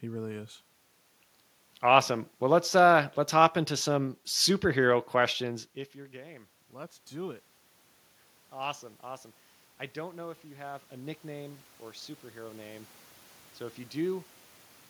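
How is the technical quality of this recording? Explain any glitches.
The recording has one recurring glitch: the level creeps upward twice because the automatic gain control keeps compensating for quieter input.

Automatic gain rising occurs from 5.43 to 7.52 s, right after "hop into some superhero", and again from 9.94 to 11.7 s, just before "or superhero name". Around 5.5 s the talker drops away from the microphone and the input falls by about 21 dB. The gain control reacts by raising its gain by about 4 dB each time, over roughly two seconds. Voice and room noise therefore swell together, so the background rises along with the speech.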